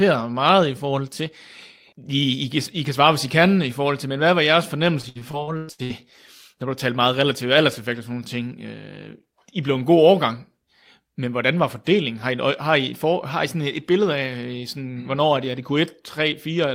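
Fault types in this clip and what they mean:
Repeated packet loss (robotic sound), 5.01 to 5.92 s: right after "men hvad var jeres", the speech breaks up into eight short holes, the longest about 0.1 s, adding up to roughly 400 ms of missing audio. Each hole is filled by stretching the sound just before it, so close to half of this stretch is patched rather than real. Those repeated fills, arriving one after another, give the choppy quality with pieces missing.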